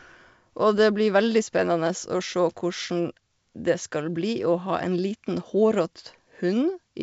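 No technical faults are audible.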